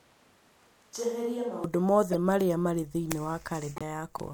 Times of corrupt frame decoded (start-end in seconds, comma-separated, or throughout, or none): 2.12-2.14, 3.76-3.82